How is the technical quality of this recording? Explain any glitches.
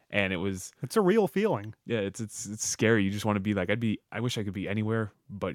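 Listening closely, nothing in the recording stood out as a glitch or technical problem.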